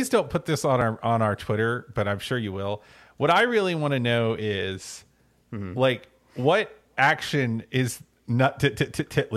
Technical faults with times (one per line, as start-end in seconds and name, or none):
0.81 overlap between stream segments
8.79 overlap between stream segments